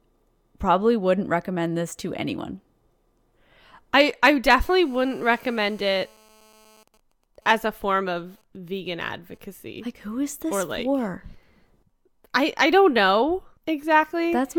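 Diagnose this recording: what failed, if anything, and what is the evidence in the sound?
A hard, raspy buzz rises under the speech from 4.65 s to 6.83 s, right after "I I", sitting about 32 dB below the signal. It is steady, pitched at 217 Hz with a dense stack of harmonics, and it bears no relation to what is being said. This is GSM phone buzz entering at the analogue wiring stage: a nearby 2G handset in a call emits radio bursts 217 times per second, and an audio input rectifies each pulse into the audible drone.

From 6.88 s to 9.52 s the steady drone gives way to even ticks with a longer 217 Hz buzz twice a second, around 40 dB below the speech. These are GSM signalling bursts, again coupling in through the analogue wiring. The same handset is still in the call, but its user has gone quiet, so it transmits only short clusters of bursts instead of a continuous train. The circuit demodulates each cluster, producing the intermittent, rhythmic pattern.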